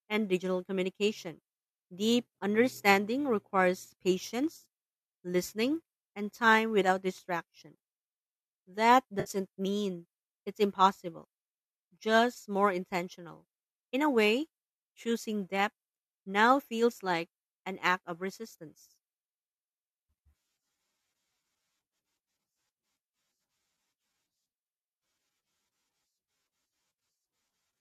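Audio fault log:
9.20 to 9.30 s, AAC frame loss with concealment: A short patch of the speech turns smeared and noisy, just before "mean it's impossible". Several AAC frames went missing, and the decoder covered the gap by reusing the last good spectrum with its phase scrambled. The gap was too brief to fade into silence, so it is heard as a phasey blur. The light graininess of the surrounding audio is likely from low-delay AAC compression.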